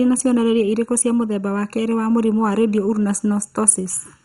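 Speech runs through two faults for its whole length. A channel delay of under a millisecond produces comb filtering, giving a hollow, phasey tone. The spectrogram shows fixed dark notch stripes from around 700 Hz, repeating roughly every 1.4 kHz. The dull, gurgling, granular texture and the hard ceiling at 11.2 kHz, with blocky upper bands flickering on and off in the spectrogram, point to heavy MP2 compression, likely at a low bitrate around 56 kbps.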